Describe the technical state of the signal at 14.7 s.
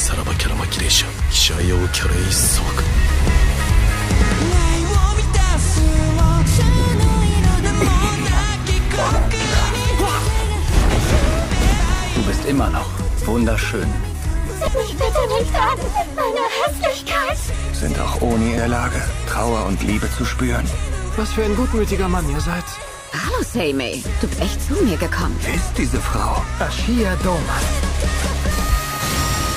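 At 14.68 s there is an abrupt jump in the sound, as if about a tenth of a second has been skipped with no gap. This is likely a dropped buffer (overrun): the recording software fell behind, the hardware overwrote unread samples, and the surviving audio was joined directly across the loss.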